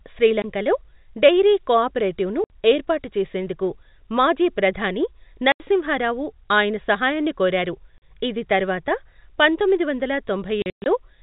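Hard-edged dropouts cut the speech at 0.42–0.44 s, at 2.44–2.5 s after "డెయిరీ కోఆపరేటివ్ను", at 5.52–5.6 s after "ఏర్పాటు చేసేందుకు మాజీ ప్రధాని", at 7.98–8.01 s, and in a scattered 240 ms stretch from 10.62 to 10.86 s after "ఇది తర్వాత పంతొమ్మిది వందల", with the longest hole there lasting 120 ms. This is packet loss filled with silence. Missing packets were replaced with nothing, and gap lengths of 20 to 120 ms fit 20 ms packets. The G.711 telephone coding caps the band at 4 kHz.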